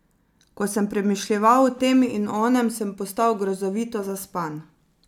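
No technical faults can be heard anywhere in the speech recording. There is nothing here that calls for a timestamp or a description of a fault.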